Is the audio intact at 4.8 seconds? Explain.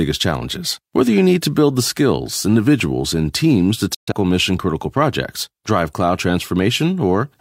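Yes, the speech at 4.8 seconds plays through intact, with no dropout, click, distortion or other fault at that moment.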